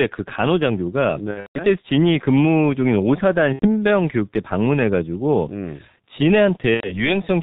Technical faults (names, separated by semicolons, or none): G.723.1 codec; VoIP packet loss concealed by the speech codec